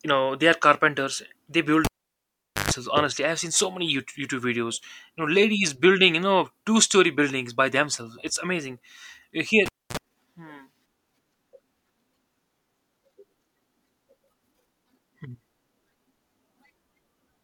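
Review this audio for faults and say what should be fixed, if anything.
Pops, dropouts and short 50 Hz and 60 Hz buzz bursts at 1.85–2.71 s and 9.66–9.97 s come from a cable pulled and plugged in while live, with the tip briefly touching. Secure connectors and mute the channel before touching cables.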